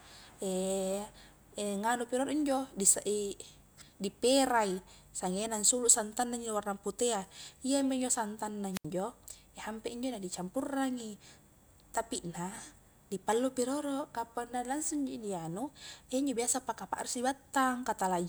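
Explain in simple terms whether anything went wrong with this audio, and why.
Just before 8.72 seconds the speech picks up a quick burst of hiss, then drops into near silence for about 73 milliseconds, and comes back by 8.86 seconds. This is a wireless microphone squelch dropout: the radio signal faded, so the receiver briefly muted itself to hide the static. The rising hiss before the gap is what gives it away. A digital network dropout cuts off cleanly, with no hiss leading into the silence.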